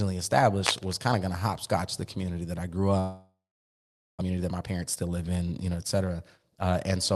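It's a speech clip carried over a call path, and right after "community that I grew", from 2.99 to 4.23 s, the sound breaks up. The last bit of audio gets stretched into a fading buzz or hiss, then there's about 0.84 s of near-silence, and the speech picks up again with roughly a full second of it gone. That's most likely a long network dropout: packets stopped arriving, the receiver papered over the gap for about 1.2 s, and the missing piece was never recovered. The recovery also shifts the timing by about a fifth of a second. Right after that, from 4.30 to 5.17 s, leading into "in you know et", the talker sounds rushed, running about 14% fast at unchanged pitch. It happens again from 6.19 to 6.52 s, just after "in you know et", at about 13% fast. Both are jitter buffer speed-ups. Having built up too much delay, the receiver snipped out tiny pitch-period slices in quick succession, roughly 150 ms in the first run and around 50 ms in the second, which gives the hurried feel. 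Throughout the clip the top end stops around 12 kHz, with Opus-style coding texture, which fits a 32 kbps call setting.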